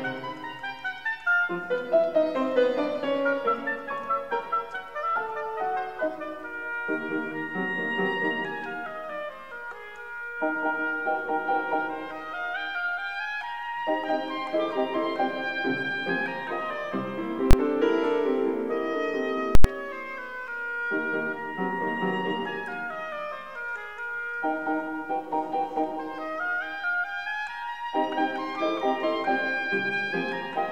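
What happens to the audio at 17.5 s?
At 17.51 to 17.53 s the audio hits invalid numbers at full scale. A calculation produced infinite or undefined values, and these were forced to the largest possible sample value, so the output is pinned flat at one extreme value, far beyond the audio's peaks, for about 23 ms, which fits a 1024-sample processing block. Because the span is so short, it is heard as a single loud bang. Unlike clipping, where real waveform peaks are flattened against full scale, nothing of the original sound survives inside this block.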